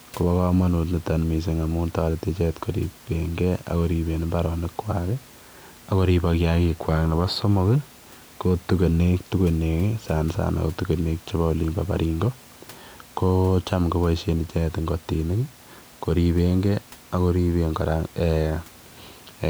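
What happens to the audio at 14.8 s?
Nothing goes wrong at 14.8 s: the speech continues intact, with only the room's own background noise sitting about 26 dB below it.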